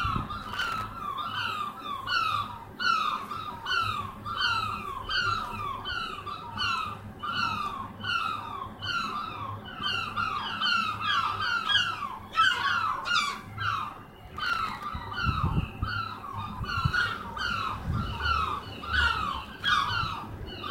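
A recording of sounds with three bursts of processor overload crackle, at 0.43–0.83 s, 14.27–14.84 s and 19.45–19.68 s. The processor repeatedly missed deadlines for very short buffers, about 0.7 ms each, leaving dozens of hard-edged silent gaps that merge into gritty tearing.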